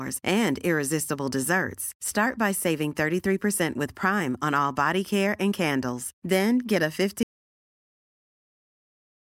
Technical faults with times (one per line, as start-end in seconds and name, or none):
7.23-9.40 audio dropout to silence